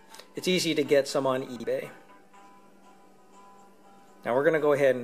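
At 1.56 to 1.64 s, two 40 ms chunks play swapped, one arriving a chunk late: chunks out of order. The sound jumbles briefly at the hard joins, but unlike a dropout or stutter, nothing goes missing and nothing repeats.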